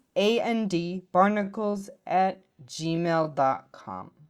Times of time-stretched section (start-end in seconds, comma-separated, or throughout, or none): 1.29-4.29